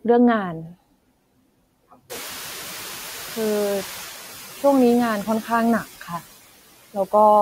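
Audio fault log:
throughout, noise suppressor artifacts: the steady background is pulled down by about 12 dB, decided band by band and frame by frame, so the noise floor dips in the gaps between phrases and swells back up beneath the speech.
2.09–4.11 s, noise suppressor catching up: around 2 s the room noise jumps by about 22 dB, ending up about 18 dB below the speech. The suppressor's running estimate of the noise still reflects the quieter earlier level, so at first it removes only about 5 dB and the louder background comes through with less reduction. Over roughly 2 s the estimate climbs to match the new level, and the noise gradually sinks back toward full reduction.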